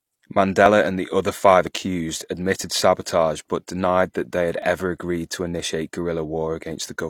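Overlap between stream segments at 0.66, 1.67, 2.64 and 4.62 s: overlapping one-second segment timestamps make the player discard about 30 ms of genuine speech, leaving tiny skips, the last between "denied that they had" and "agreed to".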